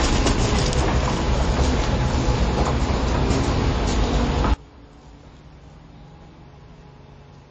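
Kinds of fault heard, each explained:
MP3 compression: Likely a low-bitrate MP3 encode, around 31 kbps, starving high frequencies of bits, so nothing survives above 8.3 kHz and the sound turns plainly watery and smeared.
Sudden gain jump: Likely an unramped digital gain change at 4.54 s, dropping the level by about 24 dB in one step, with sound and background falling together until the end.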